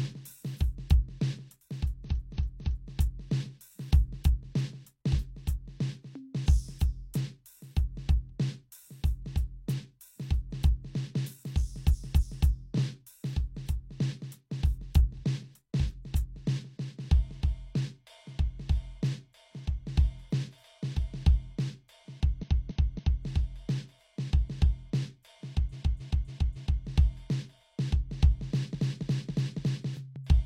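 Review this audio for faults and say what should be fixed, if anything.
Repeated frames at 2.05–2.88 s, 11.89–12.45 s, 22.39–23.22 s, 25.69–26.80 s and 28.70–29.82 s: the same 0.28 s slice of music replays two to four extra times, a looping stutter that lengthens the track rather than leaving the gap of a dropout. To prevent it, make the encoder, muxer or transport write each compressed frame exactly once, and discard duplicates by sequence number before decoding.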